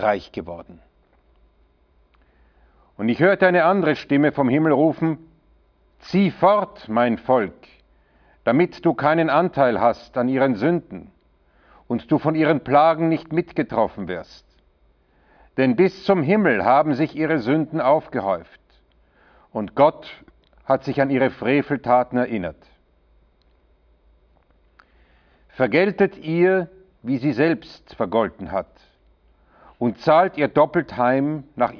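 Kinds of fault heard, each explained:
No kinds of fault are heard in this clip.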